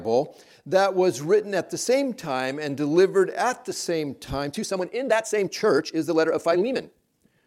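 At 4.37 s the pace suddenly jumps to about 1.67 times normal and stays there to the end, while the pitch doesn't move. That's a time-stretched section, likely software squeezing the audio to fit a length by dropping short pieces, so it sounds rushed.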